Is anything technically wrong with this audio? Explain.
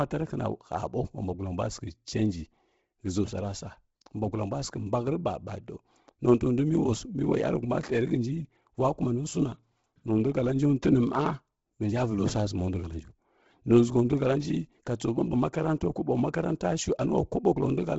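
Yes. Throughout, the speech was likely squeezed through Bluetooth LC3 compression at a low bitrate. Heavy codec damage leaves a breathy, grainy edge, with nothing above 7.7 kHz.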